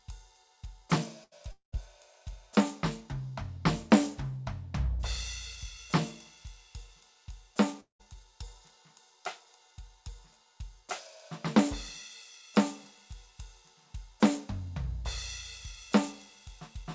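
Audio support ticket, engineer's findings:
Burst of packet loss at 1.24–1.33 s: the music freezes into a short held tone that fades, then jumps ahead. About 80 ms missing, roughly 75 ms of it papered over by the receiver extending the last sound while ramping it down.

Long network dropout at 1.51–1.74 s and 7.80–8.01 s: sound smears into a fading buzz, then goes silent before resuming further on. Likely a stall in delivery; about 220 ms and 200 ms lost, with roughly 100 ms and 130 ms of dead silence after concealment gives out.

Top end stops at 8 kHz throughout, which points to the call codec path, consistent with G.722 at 64 kbps.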